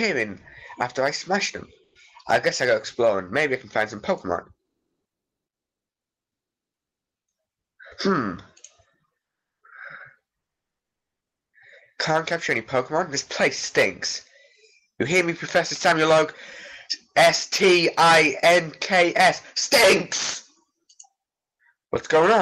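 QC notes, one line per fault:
1.83 to 1.95 s, comfort noise in place of the background: the sender likely halted transmission under Opus DTX, so the receiver filled the 120 ms gap with generated noise, and the background, about 46 dB below the loud parts, turns smoother and about 3 dB quieter.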